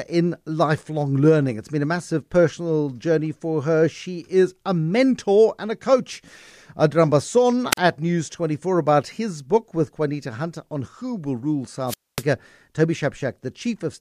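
Twice the radio link of an analogue FM wireless microphone fades until the receiver's squelch shuts the output, a wireless microphone squelch dropout. Hiss rises briefly, then the speech falls into near silence: about 41 ms at 7.71–7.78 s, and about 244 ms at 11.86–12.24 s.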